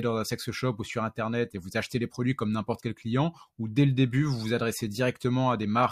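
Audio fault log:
No technical faults are audible in the signal; level, timing and bandwidth hold steady over the whole recording.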